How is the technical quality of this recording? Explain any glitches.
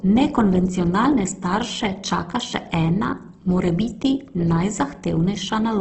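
The quality is held back by heavy codec damage that runs through the whole speech clip. It sounds like Opus compression, likely at a very low rate around 12 kbps. Nothing comes through above about 8.1 kHz, and with bits scarce the encoder fills bands with folded or noise-like content, so the speech turns rough and grainy rather than swirly.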